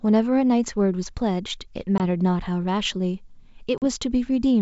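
Speech over what sounds like a G.722 wideband line, clear up to around 7 kHz in its full 64 kbit/s mode, has two dropouts from packet loss on an ADPCM call. At 1.98 to 2.00 s there's a hard-edged 20 ms hole, about one packet's worth, and at 3.78 to 3.84 s a 40 ms gap, a couple of packets. Each gap gets filled with silence, and the decoder's predictor and step size lose sync with the sender's, so the speech comes back slightly distorted before settling.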